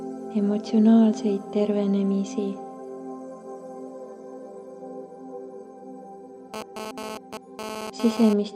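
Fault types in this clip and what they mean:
GSM phone buzz: a hard, raspy buzz with many harmonics, entering at 6.54 s and lasting to 8.33 s, about 8 dB below the signal and unrelated to it. A nearby 2G phone transferring data transmits in bursts about 217 times a second, and the audio circuit rectifies those radio pulses into sound.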